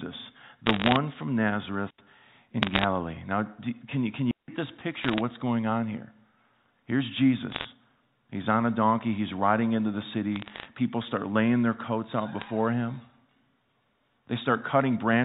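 A speech recording over a G.711 mu-law telephone path, band-limited below 4 kHz, carries bursts of bit errors on a digital phone line at 0.66–0.96, 2.62–2.84, 5.04–5.21, 7.50–7.64, 10.36–10.65 and 12.40–12.48 s. Flipped bits, at a rate under one percent, corrupt single samples into sharp ticks, seen as isolated waveform spikes and thin vertical spectrogram lines. Two digital wireless dropouts, at 1.90 s lasting 0.08 s and at 4.31 s lasting 0.17 s, are clean muted holes where the receiver lost too much data. They appear as flat gaps in the waveform and blank columns in the spectrogram, with no noise burst at either edge.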